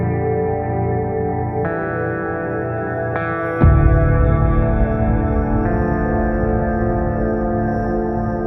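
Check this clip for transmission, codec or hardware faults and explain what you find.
No transmission, codec or hardware faults.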